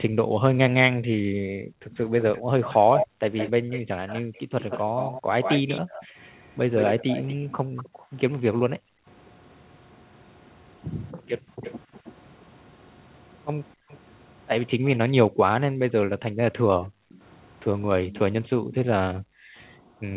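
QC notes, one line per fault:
0.14–4.35 s, 7.89–9.07 s, 11.14–11.59 s and 13.75 s to the end: background gated by the echo canceller. The canceller cut the microphone during loudspeaker playback, so room sound dips by up to about 40 dB (about 29 dB at 11.14 s) before returning.
2.19–7.89 s: echo leak. Far-end playback likely got past the echo canceller, leaving a copy delayed by 168 ms, about 10 dB below the main sound.
11.63–12.13 s, 13.89–14.97 s, 17.09–18.75 s: echo leak. Residual loudspeaker pickup likely returns as a 322 ms-delayed copy, about 15, 25 and 20 dB down respectively.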